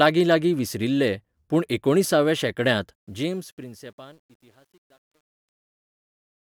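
Sample clock jitter runs through the whole speech clip: timing wobble of roughly two microseconds adds a faint hiss about 40 dB down, showing as broadband haze that thickens above steep, loud passages. From 2.95 s, truncation distortion on a fade sets in as the smooth fade-out begins. Too few bits, which fits a 10-bit gain stage without dither, turn the tail into stair-stepped waveforms. It sounds gritty from 3.72 s to 6.49 s, with harmonic streaks on the spectrogram.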